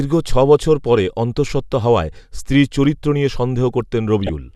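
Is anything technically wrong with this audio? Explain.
Yes. A corrupt frame decoded at 4.23 to 4.29 s: damaged bits in about four compressed frames were decoded anyway, misplacing energy in frequency and giving a brief, fairly loud chirp, squeak, blip or burst of noise.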